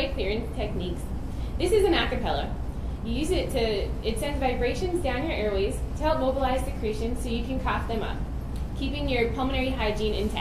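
Nothing technically wrong can be heard in this audio.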